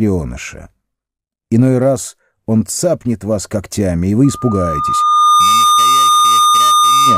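Loudspeaker feedback squeal enters at 4.24 s and runs to the end: a microphone hears its own loudspeaker, the loop gain tops one near 1.2 kHz, and that single tone swells over about a second into a steady squeal a few decibels louder than the sound.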